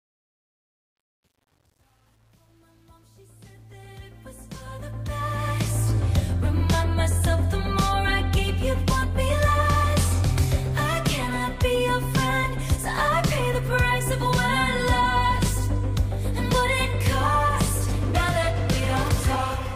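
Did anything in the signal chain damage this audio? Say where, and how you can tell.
Yes, truncation distortion on a fade at the sample-format stage, 0 to 5.96 s, grittiest until 4.48 s. The fade's low levels turn gritty and stepped without dither, which fits about 9-bit resolution.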